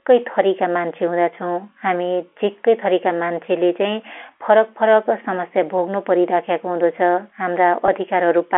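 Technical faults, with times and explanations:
7.86 to 7.88 s, packet loss with pitch repetition: 20 ms of the stream went missing, which fits one lost packet. The receiver bridged it by repeating the last pitch period, so the speech briefly holds on a slightly buzzy, sustained tone.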